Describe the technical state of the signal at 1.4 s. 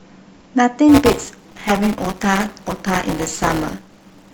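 At 1.4 s, buffer tearing is under way, running from 0.88 s to the end of the clip. The write and read positions of the ring buffer have slipped, so a small slice of each period carries audio from about 10 ms earlier, bounded by hard joins. This adds a steady robotic 200 Hz buzz over the speech, pointing to a buffer period of about 5 ms.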